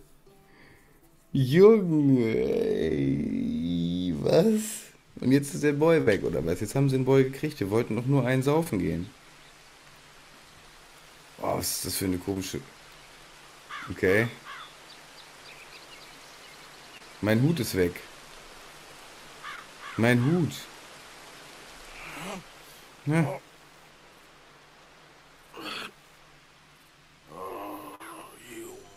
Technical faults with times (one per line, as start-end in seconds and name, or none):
6.01-6.09 burst of packet loss
8.63-8.68 short concealed packet loss
12.34-12.38 short concealed packet loss
16.98-17.02 short concealed packet loss
19.56-19.59 short concealed packet loss
27.95-28.02 short concealed packet loss